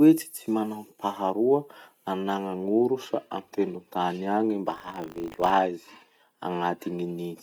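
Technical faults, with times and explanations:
4.7–5.5 s, buffer tearing: writer and reader collide each period, splicing in a small slice of audio from about 70 ms earlier, causing a 50 Hz rattle; vertical spectrogram striations, waveform jumps every 20 ms.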